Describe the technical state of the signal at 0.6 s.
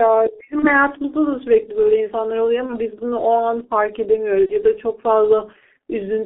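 At 0.6 s the audio sits inside the G.723.1 codec damage that runs through the whole clip. Nothing above about 3.6 kHz survives, and little below 300 Hz. The coarse, slowly updated voice model makes the speech muffled and hoarse, with smeared consonants. This fits a very low rate near 6 kbit/s.

VoIP packet loss concealed by the speech codec also covers this moment, from 0.59 to 0.68 s. About 30 ms of audio is missing, which points to a single lost frame. The decoder fills the gap by repeating its last pitch and filter at falling gain. The sound turns into a short buzzy tone or coloured noise that fades, and stays weak briefly after the gap.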